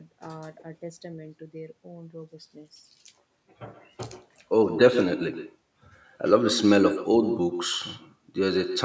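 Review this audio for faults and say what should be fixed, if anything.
An echo with no canceller runs through the whole recording. The far end is playing the call on a loudspeaker, its microphone picks that playback up, and nothing on the path removes it before it comes back. Every phrase of the speech is therefore shadowed, roughly 150 ms later, by a copy about 9 dB quieter that sounds thinner. The band stops at 8 kHz, as the call's normal microphone processing would leave it. To prevent this, enable acoustic echo cancellation at the far end, or have that side use a headset instead of a loudspeaker.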